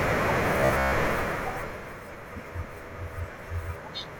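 From 0.58 to 0.92 s the speech turns into a rigid metallic buzz near 67 Hz, robotic sound likely from repeated short buffers of about 15 ms replacing most of the audio.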